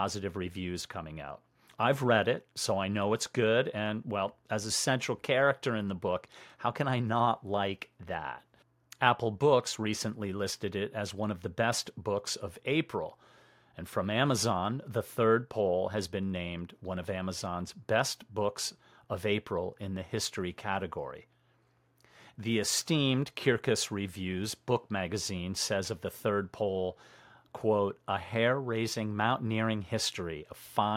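No technical faults can be heard anywhere in this speech recording. There are no fault events to place in time.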